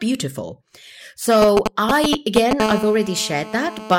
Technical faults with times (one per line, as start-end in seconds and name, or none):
1.42-2.60 GSM signalling bursts
2.60-3.95 GSM phone buzz